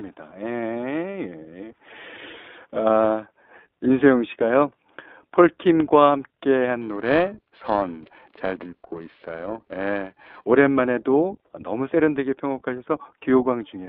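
From the start the whole clip runs through the iLBC codec, squeezed into roughly 250 Hz to 3.6 kHz, with plainly rough, synthetic speech that fits 15.2 kbps in 20 ms frames. From 6.82 to 10.44 s, periodic clock jitter at around 700 Hz wobbles the converter clock, adding sidebands that give the speech a metallic, gritty edge.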